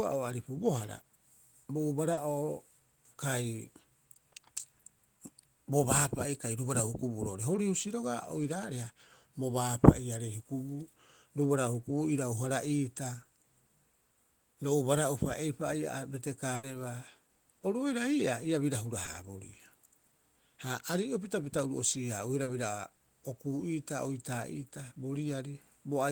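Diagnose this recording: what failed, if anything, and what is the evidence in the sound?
Network stage, short concealed packet loss at 2.13 s, 19.05 s and 22.43 s: 40, 20 and 40 ms gaps filled by extending the preceding sound.

Network stage, burst of packet loss at 16.55 to 16.65 s: 80 ms of audio is missing, replaced by a fading continuation of the last sound. The waveform decays smoothly and then resumes further on.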